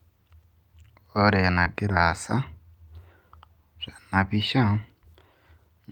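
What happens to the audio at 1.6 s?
At 1.63 to 1.68 s the speech has a short concealed packet loss. About 20 ms of audio did not arrive at the decoder in time, and the receiver synthesised roughly 21 ms to cover the gap. It extended the preceding sound, repeating its pitch if voiced or shaping noise if not, then crossfaded back into the received signal. The result is a brief smear or wobble lasting a few hundredths of a second.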